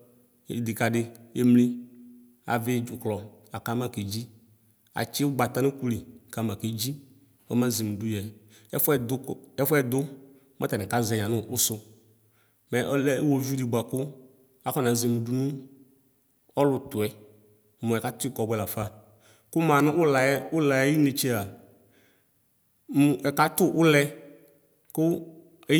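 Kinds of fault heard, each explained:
No technical fault can be heard anywhere in this speech recording. There is nothing to list under any kind of fault.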